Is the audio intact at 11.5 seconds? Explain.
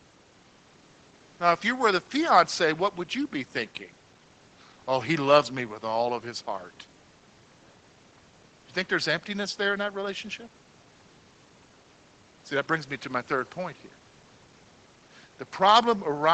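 Yes, the audio is intact at 11.5 seconds, with nothing at that point beyond the normal sound of a call path that carries nothing above about 8 kHz.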